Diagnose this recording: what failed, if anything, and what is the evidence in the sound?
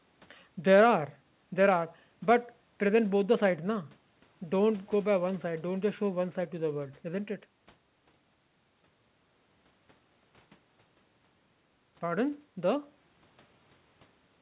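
Nothing failed: the speech is band-limited to 4 kHz, which is expected of a normal call path and fits a G.711 A-law codec, and the microphone processing and jitter buffer leave no audible defect.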